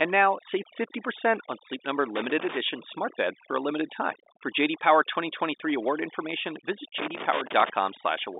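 Throughout the clip the pauses drop to a near-silent background flecked with twinkling specks. This is overdone noise removal: a noise reduction stage set far too hard pushes individual frequency bands down or out whenever they sit close to its noise estimate, so the quieter parts of the voice are stripped along with the noise. The narrow telephone band, roughly 250 Hz to 3.7 kHz, is consistent with G.711 telephone coding at what sounds like 64 kbps, and the codec itself adds little or nothing audible.

From 2.16 to 2.57 s, and again from 6.98 to 7.70 s, irregular bursts of crackle and scratching break through the sound. This is loose connector crackle: a worn or dirty contact rapidly makes and breaks as it shifts, chopping the signal on and off. The second burst is the longer of the two, at about 0.7 s against about 0.4 s for the first.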